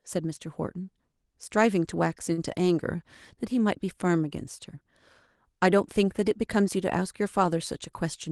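A short stall from a late packet occurs at 2.33 to 2.40 s in this speech. A packet arrived late, the jitter buffer ran dry, and the receiver stretched the preceding sound by about 43 ms to cover the gap, then resumed where it had stopped. Nothing is lost, but that moment of speech is held slightly too long with a slight buzz or dip, and everything after it runs about 43 ms later. The call codec's coding noise and a top end cut near 12 kHz are present throughout.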